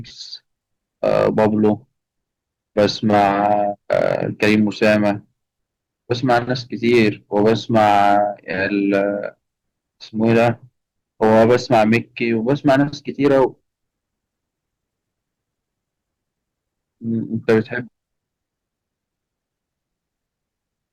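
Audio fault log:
throughout, hard clipping: crackly harsh edges on louder syllables, because the level is driven about 9 dB past full scale, flattening a small share of peaks.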